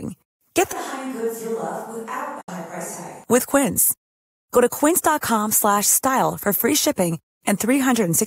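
Speech, with a sudden change in character from 0.73 s to 3.24 s: the voice turns roomy and hollow, loses its low end, and drops about 10 dB, while background room noise rises to roughly 35 dB below the speech. At 3.24 s the close, full sound snaps back. This is a switch to a distant microphone, most likely because the close microphone's signal was missing and a farther pickup, such as a camera microphone, was used for that stretch. Inside that section, from 2.41 s to 2.49 s, the sound fades out over about 8 ms and stays silent for 64 ms before returning. This is a digital broadcast dropout: the receiver stopped getting usable data and muted rather than play corrupted audio. The length of the gap fits two lost frames of about 32 ms each, and the audio sent during that hole is gone for good.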